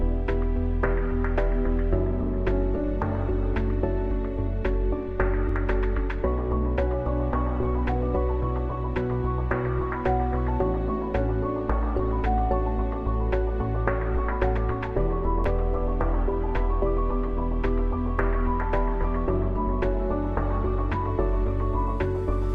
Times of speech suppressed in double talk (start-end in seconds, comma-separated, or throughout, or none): none